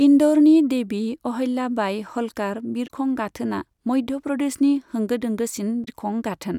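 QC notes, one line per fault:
2.84–2.90 s and 5.81–5.88 s: damaged data in a compressed stream. Each event lasts about 70 ms. Corrupted bytes leave the decoder misreading frames, so it outputs garbage coefficients until it regains sync at a valid frame header. The result is a brief chirp or squawk that breaks the speech. On a spectrogram this shows as a short vertical block of broadband or oddly tonal energy with hard edges. The waveform shows an abrupt discontinuity.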